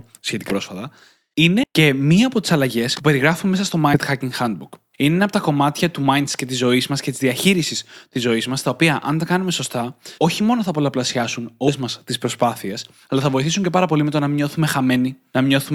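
Compressed frames are skipped at 0.49–0.54, 1.63–1.65, 2.95–3.02, 3.93–3.98, 6.31 and 11.67–11.71 s. Runs of 20 ms frames never play, so the speech jumps ahead, from about a tenth to about four tenths of a second. One such jump comes right after "από τα κομμάτια του".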